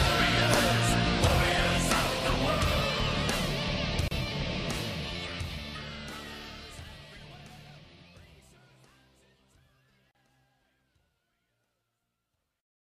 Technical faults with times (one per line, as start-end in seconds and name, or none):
4.08-4.11 gap at a join of encoded pieces
10.11-10.15 gap at a join of encoded pieces